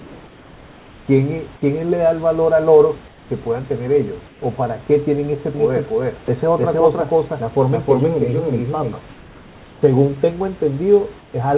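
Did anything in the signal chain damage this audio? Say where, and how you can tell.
Yes. Comfort noise in place of the background appears in call processing. Pauses at 0 to 1.08, 3.08 to 3.3, 4.28 to 4.42, 9.1 to 9.82 and 11.2 to 11.34 s turn steady and featureless, about 2 to 4 dB quieter. Discontinuous transmission is the likely cause.

A doubled audio track runs from 5.54 to 8.94 s. A copy at about the same level trails by roughly 300 ms, with no room colour, and starts and stops abruptly. A second capture path or an edit is the likely cause.

Sound dropped by the voice detector occurs at 6.26 s. About 10 ms of speech is replaced by comfort noise, likely because the detector took it for background.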